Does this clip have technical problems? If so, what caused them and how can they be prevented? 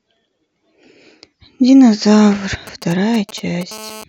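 Yes. From 2.67 to 3.63 s a galloping dit-dit-dit of brief 217 Hz buzzes sits roughly 20 dB under the speech. These are GSM signalling bursts: a nearby 2G phone's short radio bursts, rectified by the audio circuit. Keeping phones away from the recording chain or switched off prevents this.

From 3.71 to 4.04 s a hard, raspy, harmonic-rich buzz at 217 Hz runs steadily about 19 dB below the speech. This is GSM phone buzz from a handset in a call, its 217-per-second transmission bursts rectified into audio. Shielded, balanced cabling and phones kept well away prevent it.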